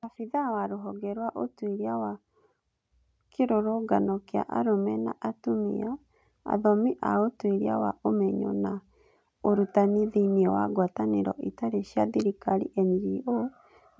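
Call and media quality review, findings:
Automatic gain rising, 0.3–2.26 s: speech and background noise swell together by about 7 dB, gradual over roughly two seconds, unlike a gain step's abrupt jump. AGC in call microphone processing.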